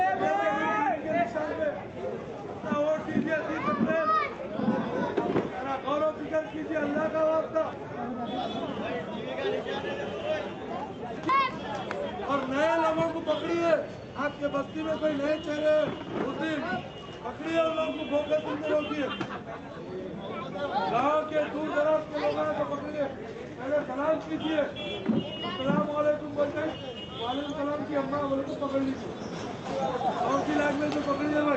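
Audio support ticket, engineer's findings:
Nothing stood out on listening; the audio carries the ordinary character of an Opus call path, with content topping out around 8 kHz.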